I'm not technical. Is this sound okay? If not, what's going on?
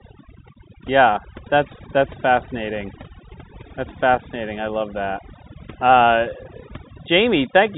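No. Overdone noise removal runs through the whole clip: background noise drops and breaks up into twinkling specks, unlike the ordinary muffled telephone sound.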